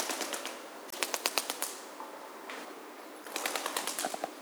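At 0.88 s there's a short burst of damaged data in the compressed stream, lasting about 60 ms to 0.94 s, and it happens again from 3.22 to 3.26 s for about 44 ms. In both spots some of the encoded bytes are wrong, so the decoder misreads those frames, loses its lock on the stream and has to hunt for the next good frame header. You hear each one as a brief disturbance, a chirp, squawk, click or short hole, that cuts across the sound.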